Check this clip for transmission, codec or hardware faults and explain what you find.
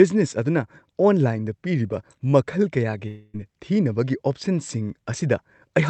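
One fault stands out. Long network dropout, 3.07 to 3.36 s: packets likely stopped arriving, so the receiver stretched the last sound into a fading buzz, and speech resumes with about 260 ms lost.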